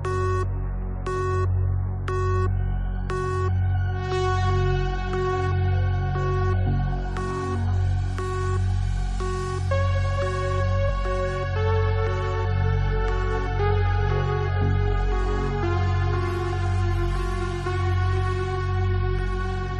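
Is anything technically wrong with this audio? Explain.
Yes, there's damaged data in the compressed stream, from about 10.88 to 10.90 s. A short stretch of the encoded file was corrupted, so the decoder misread those frames, lost sync and hunted for the next valid header, leaving a brief glitch in the audio.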